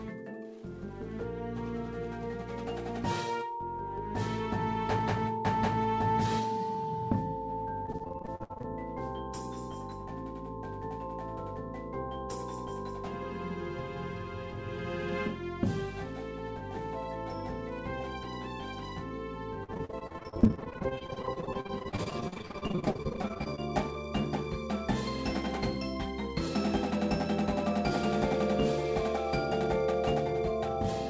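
From 7.86 to 8.66 s, and again from 19.64 to 23.60 s, repeated packet loss (robotic sound) chops the audio. Gaps up to about 50 to 60 ms are patched by stretching the last sound, so it sounds choppy with pieces missing. A spectrogram shows smeared, repeated frames under an 8 kHz band ceiling.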